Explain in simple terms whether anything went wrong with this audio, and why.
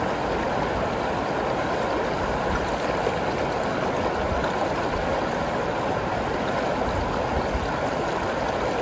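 Nothing went wrong: the audio passed through an ordinary WebRTC call path using the G.722 codec, which by design carries nothing above 8 kHz, so the softer top end is simply how that call link sounds.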